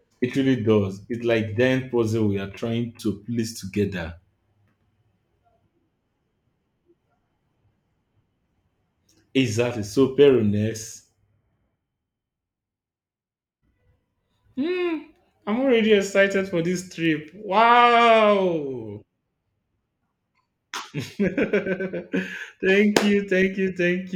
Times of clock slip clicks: 0.11-24.14

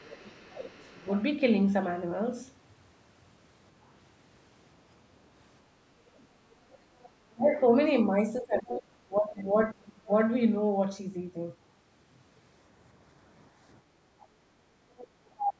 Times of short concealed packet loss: none

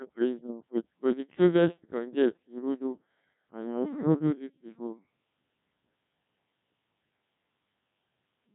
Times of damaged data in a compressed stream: none

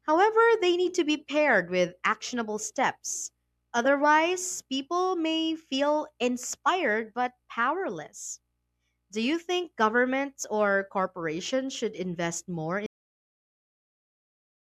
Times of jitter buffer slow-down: none

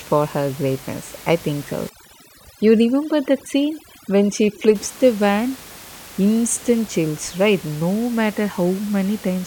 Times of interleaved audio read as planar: none

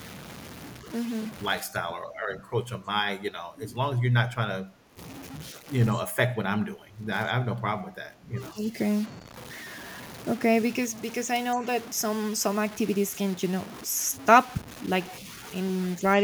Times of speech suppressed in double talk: 1.60-4.97, 5.53-5.68, 5.94-8.67

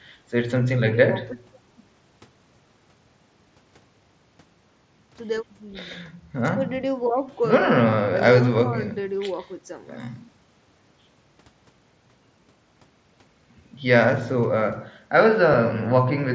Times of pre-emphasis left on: 8.16-10.32

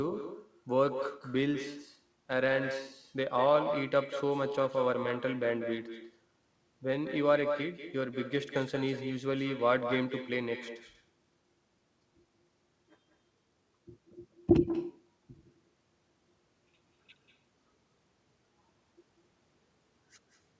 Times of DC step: none

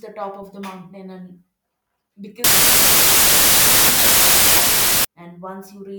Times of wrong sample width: 2.44-5.05

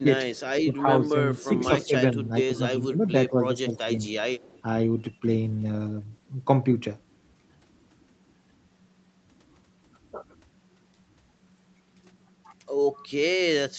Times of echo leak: 0.36-0.40, 2.55-3.09, 3.76-4.62

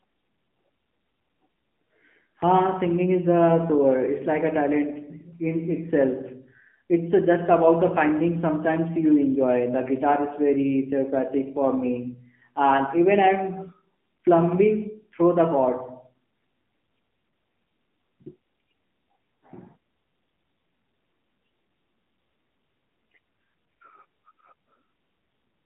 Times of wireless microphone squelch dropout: none

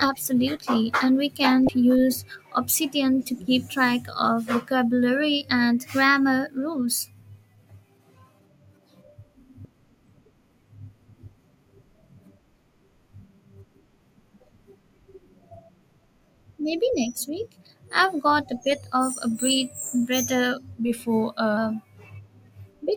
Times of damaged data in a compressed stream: 1.66-1.69, 9.62-9.65

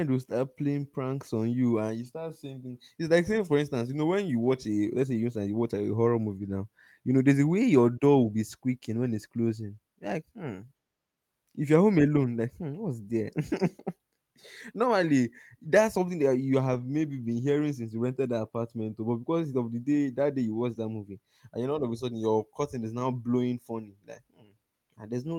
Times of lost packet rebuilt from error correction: 2.03-2.05, 16.73-16.83, 20.73-20.79, 24.13

